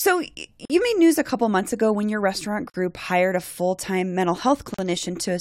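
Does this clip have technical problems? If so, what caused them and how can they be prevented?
Yes. The speech has three gaps at a join of encoded pieces: 0.65 to 0.70 s (46 ms), 2.70 to 2.74 s (43 ms, between "ago when your restaurant" and "hired a full time"), and 4.74 to 4.79 s (43 ms, after "a full time mental"). They recur every 2.0 s because separately encoded 2-second segments were joined with each encoder's start-up delay and final-frame padding left in. Unlike a dropout, nothing is lost: the speech resumes exactly where it stopped, with smeared edges. To prevent it, trim encoder delay and padding using gapless metadata, or encode the audio as one continuous stream.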